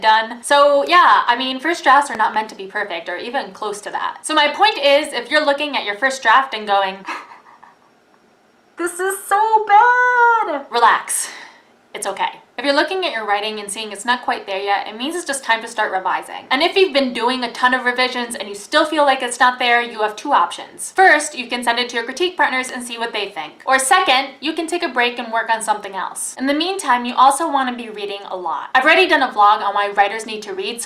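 A sudden voltage step, likely from a plug, switch or static discharge, lands on the signal twice, producing a loud pop. Between 2.15 and 2.36 s a double pop rises about 5 dB over the sound; at 22.69 s a single sharper pop peaks about 10 dB above it, the sound continuing underneath.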